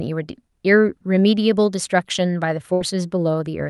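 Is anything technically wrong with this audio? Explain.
Yes. From 2.73 to 2.83 s there is a burst of packet loss. A run of consecutive packets never arrived in time, so the receiver stretched the last speech sound for about 71 ms while fading it, giving a brief decaying continuation before playback resumes roughly 80 ms further along, with that stretch of speech gone. The call codec's band limit near 12 kHz applies throughout.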